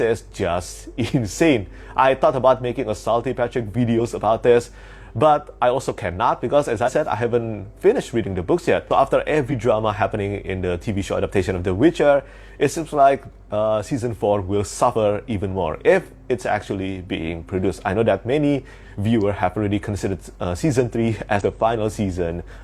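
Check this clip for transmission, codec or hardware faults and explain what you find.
Four brief faults are present, all from damaged data in a compressed stream. Short blips interrupt the sound at 3.95–4.01 s, 6.83–6.89 s, 9.48–9.53 s and 21.37–21.41 s, each around 50 to 60 ms. Corrupted bytes make the decoder misread those frames and lose sync until it locks onto the next valid frame header.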